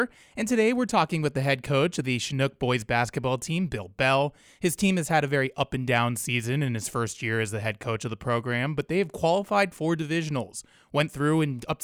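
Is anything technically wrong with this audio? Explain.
No, nothing technically wrong can be heard here.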